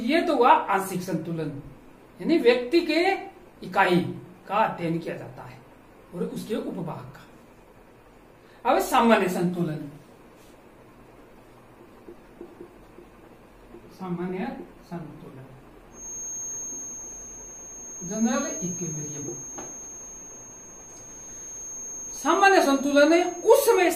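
From 15.89 s to the end, a thin, slowly swelling and fading 6.4 kHz feedback whistle sits about 15 dB below the sound, likely a speaker-to-microphone loop held right at the edge of feedback.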